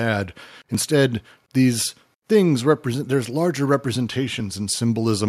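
Speech, with one jump at 0.75 s where the audio skips ahead about 15 ms, likely a dropped buffer (overrun) overwritten before being read.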